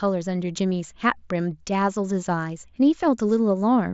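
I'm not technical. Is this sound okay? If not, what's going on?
Yes, nothing stood out on listening to this speech, which comes through a Bluetooth headset link that carries sound up to about 7.7 kHz, as such headsets do.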